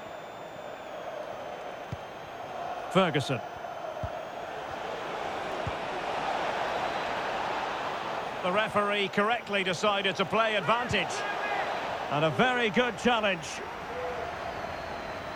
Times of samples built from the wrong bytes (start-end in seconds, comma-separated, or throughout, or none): none